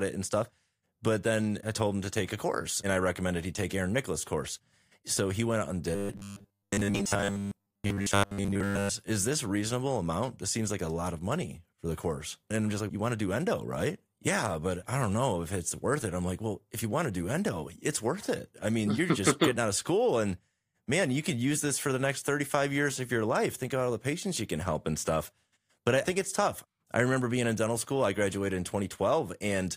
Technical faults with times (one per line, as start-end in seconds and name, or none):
5.95-8.90 robotic sound from repeated short buffers